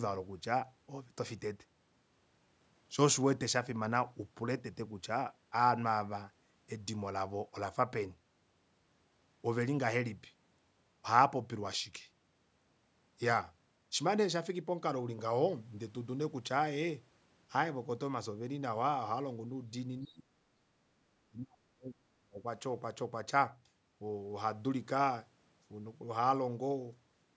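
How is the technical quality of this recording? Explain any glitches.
The recording has two stretches where the speech is pushed down sharply, both just after the 20-second mark. The audio contains nothing above 8 kHz, consistent with call microphone processing.

From 20.03 to 20.3 s, and again from 20.82 to 22.46 s, the speech sinks by roughly 30 to 35 dB, almost vanishing. This is likely speech suppressed in double talk: with both sides talking, the echo canceller mistook this talker for loudspeaker echo and attenuated it.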